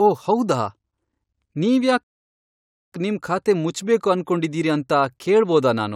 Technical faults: rebuffering stall

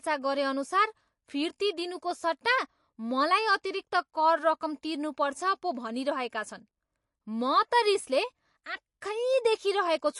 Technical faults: MP3 compression

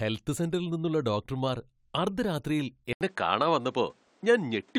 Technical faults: input switched to a poorer device

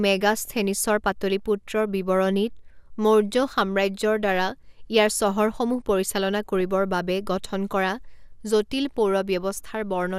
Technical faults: DAB burbling

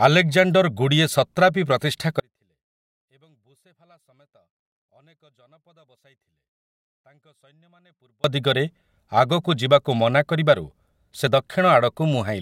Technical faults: audio dropout to a faint residue

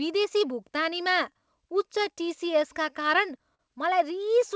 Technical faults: clock drift between sender and receiver; repeated timing corrections; short stall from a late packet

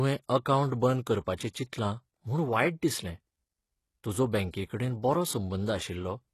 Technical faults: HE-AAC compression

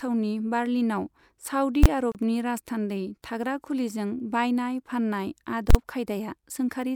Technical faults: invalid numbers at full scale; gap at a join of encoded pieces

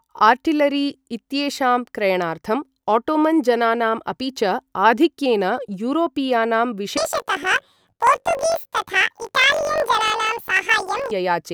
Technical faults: planar audio read as interleaved

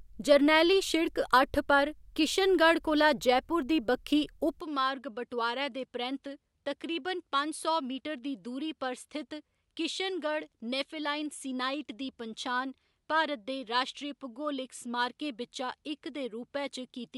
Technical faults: input switched to a poorer device

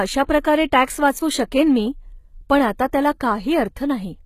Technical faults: HE-AAC compression

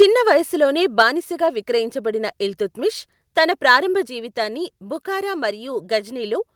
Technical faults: microphone overload; microphone volume stepped down

